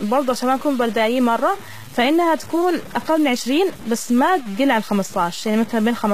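Throughout the speech, grainy distortion tracks the signal and quiet passages sputter; the waveform shows coarse stair-steps, fitting a likely 5-bit truncation without dither, with error around 20 dB below.

Also throughout, sibilants sound metallic and lispy; the spectrogram shows copied, smeared treble bands ending at 14.9 kHz, pointing to likely HE-AAC compression at around 20 kbps.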